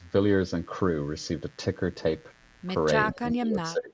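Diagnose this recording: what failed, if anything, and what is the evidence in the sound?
The analogue wiring stage picked up interference: a dimmer, rectifier or poorly shielded cable let sharp switching spikes from the 60 Hz mains into the signal path twice per cycle. The result is a mains buzz that runs through the whole recording, a steady, raspy tone built from 60 Hz and its harmonics stretching up into the kilohertz range, sitting about 30 dB below the speech.

From 3.13 s to the end, the call's echo canceller appears to have failed during double talk, likely because both sides spoke at once and it could not tell the near talker from the loudspeaker echo. It attenuated everything, so the speech suppressed in double talk dips by as much as around 20 dB, thins out and breaks up for roughly 0.7 s in total. The content above 8 kHz is missing in the same way as in the rest of the call path.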